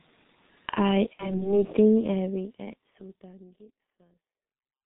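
Throughout the speech, the G.723.1 codec damage is heavy. Nothing above 4 kHz survives, so the voice sounds muffled and hoarse, and consonants smear together because the coder's vocal-tract model updates only once per 30 ms frame. The coarseness fits its 6.3 kbit/s mode. That low rate leaves too few bits to keep fine spectral detail, which gives the rough, boxy quality that runs through the clip.

From 1.13 s to 1.49 s there is VoIP packet loss concealed by the speech codec. The gap heard matches 60 ms of missing audio, which fits two lost 30 ms frames. The decoder fills it by repeating its last pitch and filter at steadily falling gain, so the sound turns into a fading buzzy tone or coloured noise. Because each frame is built on the previous one, the voice stays weak or distorted until about 1.49 s, well after packets resume. This happens before the smooth fade-out, which runs from around 2 s to the end.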